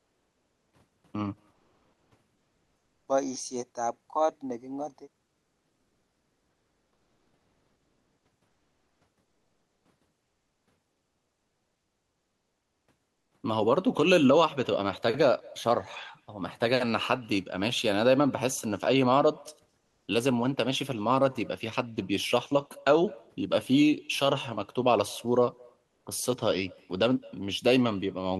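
Throughout the recording, an echo with no canceller is present. The far end's loudspeaker leaks into its microphone and nothing removes it, so every phrase of speech returns about a fifth of a second later as a faint, thin copy, about 28 dB down.

In the pauses, comfort noise replaces the background, likely from discontinuous transmission. The sender stops sending, and the receiver substitutes steady, featureless hiss at 0.0–0.71, 1.53–3.07, 5.25–9.85, 10.23–10.67, 13.13–13.31, 19.79–20.07 and 25.87–26.05 s. It drops by about 11 dB at 19.79 s and about 6 dB at 25.87 s.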